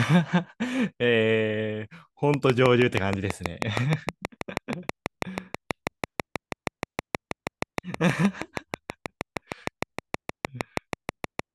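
Something in the signal chain, likely electrical interference from nearby equipment or a faulty connection or power supply, begins injecting a repeated pulse at 2.34 s and keeps it up until 11.40 s. This train of clicks arrives at a steady 6.3 per second, some fifty pulses of near-identical shape, each peaking well above the speech. It is heard as a regular, insistent ticking laid over the talker, clearly exposed in the pauses as well.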